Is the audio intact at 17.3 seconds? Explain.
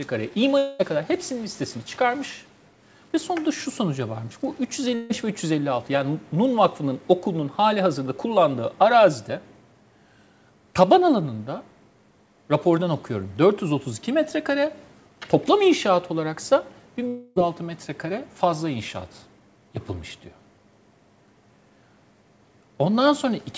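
No. From 17.08 to 17.38 s the sound breaks off and the last moment is smeared forward as a buzzy, fading hiss for about 0.28 s before the audio resumes with that stretch missing. This is likely a long network dropout, with the receiver filling the gap with synthetic sound. On a spectrogram the detail gives way to a blurred, smoothly decaying band under the 8 kHz ceiling, and the waveform shows a tapering envelope instead of silence.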